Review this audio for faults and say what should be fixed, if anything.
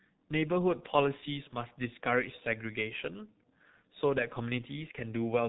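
The speech is damaged throughout by the G.723.1 codec: coarse 30 ms frames and a slowly updated voice model leave it muffled and hoarse with smeared consonants, which fits a very low bitrate near 6 kbit/s. A spectrogram shows a hard ceiling at 3.8 kHz and blocky, frame-stepped harmonics. To prevent it, carry the call over a wideband codec at a higher bitrate.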